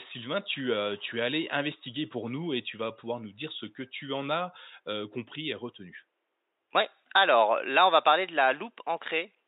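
Listening to the speech turns up nothing that stands out as a technical problem, with only a faint room noise in the background, roughly 52 dB below the speech.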